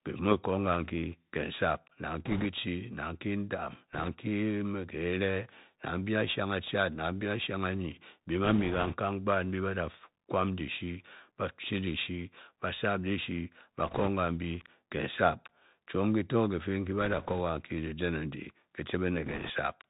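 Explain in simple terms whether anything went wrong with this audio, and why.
The speech went through a Bluetooth CVSD headset codec, the narrowband phone-call link that can't carry anything above 4 kHz. It tracks the sound with tiny up-or-down steps, so sharp s sounds turn scratchy, loud bright moments distort, and a grainy hiss sits underneath throughout.

There were also bit errors on a Bluetooth voice link: a few percent of the data got flipped at 2.25–2.46, 3.93–4.09, 8.44–8.94, 13.87–14.09, 17.01–17.41 and 19.25–19.50 s. Each flip is small, so there are no loud clicks, just short bursts of rushing, crackly noise over the speech.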